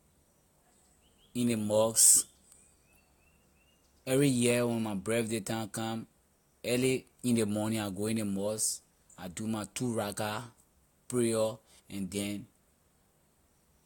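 No technical faults can be heard anywhere in the speech recording. There is nothing to point to at any moment in the audio.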